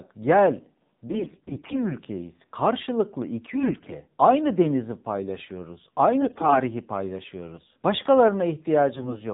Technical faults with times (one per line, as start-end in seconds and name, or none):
0.00-9.34 AMR narrowband mobile codec
1.06-1.92 AMR bit errors
3.54-3.94 AMR bit errors
6.22-6.57 AMR bit errors
8.96-9.23 AMR bit errors